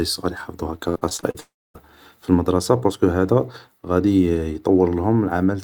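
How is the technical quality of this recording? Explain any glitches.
The recording is marred by two network faults close together in the first two seconds.

From 0.89 to 1.36 s, just after "صغار يحفضو هاكا", there is repeated packet loss (robotic sound). Audio data kept failing to arrive, and each hole, the longest about 60 ms, was patched by stretching the last sound. Around 40% of this stretch is patched sound, so the speech turns choppy with pieces missing.

From 1.40 to 1.76 s, the sound smears into a fading continuation of the previous sound. After that comes about 0.26 s of silence before the audio resumes at "المدرسة بارسكو هادا", with roughly a third of a second lost for good. This is likely a long network dropout, in which nothing reached the receiver and the receiver extended the last sound until it gave up.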